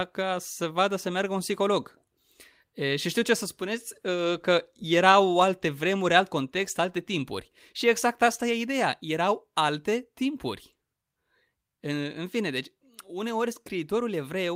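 Speech, with no technical fault to be heard anywhere in the recording. There is no moment in the audio that calls for a time or a cause.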